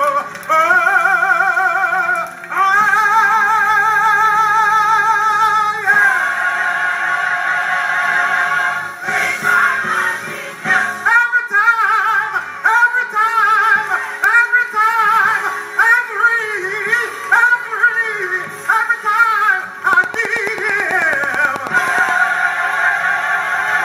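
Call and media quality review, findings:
Train of clicks, 19.93 to 22.10 s. Regular ticking at about 9.3 clicks per second, around twenty in all. Peaks stand well above the surrounding sound. Pulses near-identical in shape, evenly spaced. Audible over the material and in any gaps. Likely cause: periodic interference coupling into the capture chain, or a faulty connection or power supply. Each event injects one short impulse. Check cabling, grounding and nearby equipment first.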